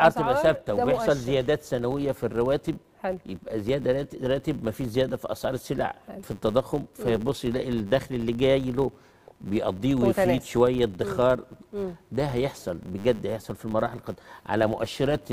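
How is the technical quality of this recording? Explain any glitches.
The recording has one persistent technical fault that runs through the whole clip.

A filter restarted on every block is present from start to end. The filter drops its memory at each block boundary and begins again from silence, so each block opens with a small transient. The ticks repeat at 100 Hz, which fits blocks of 10 ms. They are heard as a buzz that rises and falls with the level of the sound. On a waveform, small regular spikes appear every 10 ms. On a spectrogram, faint vertical lines sit at that spacing, alongside harmonic bands at 100 Hz and its multiples. Both are strongest where the audio is loudest.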